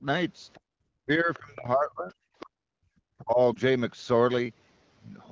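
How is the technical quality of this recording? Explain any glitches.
The recording has several call-processing glitches. Most come from an echo canceller, plus one brief codec dropout. The audio carries the clean, slightly band-limited sound of AMR wideband (HD Voice), which fits a rate of about 12.65 kbit/s.

Other side's voice leaking through: 0.53 to 0.6 s, 1.34 to 1.39 s and 2.4 to 2.45 s. Faint second-voice scraps sit far below the talker. This is likely loudspeaker echo the canceller missed.

Background gated by the echo canceller: 0.6 to 0.78 s. The canceller clamped the microphone while the loudspeaker played. Room sound drops out by about 37 dB for a moment, then returns.

Speech suppressed in double talk: 1.06 to 2.75 s and 3.19 to 3.38 s. The talker's voice dips, by up to about 40 dB, then about 25 dB. Both sides likely overlapped, so the canceller turned everything down.

Lost AMR speech frames: 3.54 to 3.58 s. 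The decoder concealed a 20 ms gap by repeating the last good settings at falling gain. This gives a short dip or warble.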